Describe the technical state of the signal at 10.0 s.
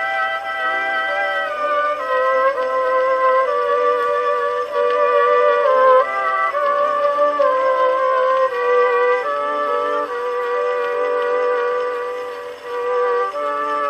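A corrupt frame decoded from 9.93 to 9.97 s, just before 10.0 s: flipped bits misplace energy, giving a brief chirp, squeak, blip or burst of noise, a narrow spectrogram smear peaking about -15 dBFS.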